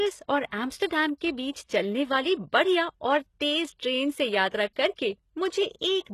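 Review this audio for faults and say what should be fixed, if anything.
Throughout the speech, the treble sounds synthetic: s sounds come out gritty and lispy, and nothing reaches above 12.3 kHz. That is likely HE-AAC compression at a low bitrate near 16 kbps. Upper bands are copied from lower ones by spectral band replication rather than coded, so their harmonics don't line up. On a spectrogram, the top band looks like a smeared, repeated copy of the region below, cut off flat at 12.3 kHz. To prevent it, encode at a higher bitrate or with a full-band codec such as plain AAC-LC or Opus.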